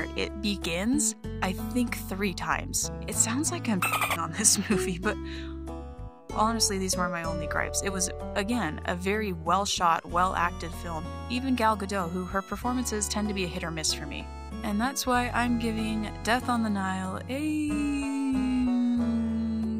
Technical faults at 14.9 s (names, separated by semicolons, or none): none